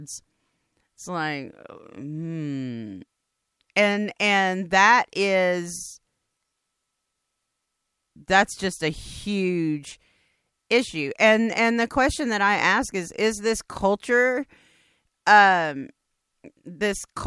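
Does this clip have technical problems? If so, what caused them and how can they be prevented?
No, nothing in this speech recording stood out as a technical problem on listening, so there is no cause to trace and nothing to prevent.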